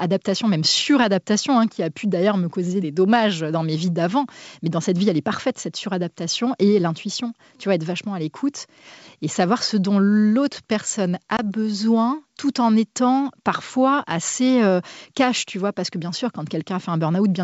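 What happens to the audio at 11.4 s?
That's packet loss on an ADPCM call. From 11.37 to 11.40 s, right after "ce dont l'autre personne", about 20 ms, likely a couple of packets, drops to a hard-edged silent gap. The decoder's predictor and step size then have to resync before "besoin tout en étant".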